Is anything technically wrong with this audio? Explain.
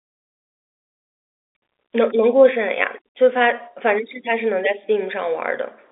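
No, nothing in this speech recording stands out as a technical fault. It sounds like ordinary G.711 telephone coding, with the sound confined to a narrow line band of roughly 300 Hz to 3.6 kHz and nothing above about 3.8 kHz.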